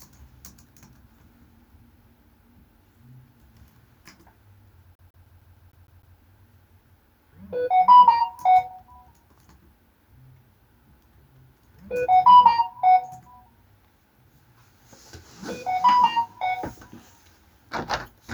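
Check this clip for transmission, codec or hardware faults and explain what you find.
One hardware fault, a CD stuck on one turn, from 4.95 to 6.18 s. A scratch keeps knocking the laser back a track, so the same 153 ms of sound replays eight times, each separated by a brief mute: a fast, even skipping-disc stutter.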